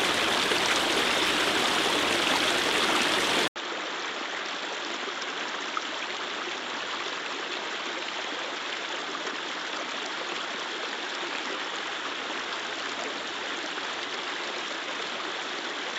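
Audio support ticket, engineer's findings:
Duller, about 10 dB quieter from 3.48 s to end, after an 80 ms dropout. Nothing above 7.6 kHz; a faint new noise floor, some 45 dB down. Likely cause: input switched to a poorer device with a narrower band and its own noise.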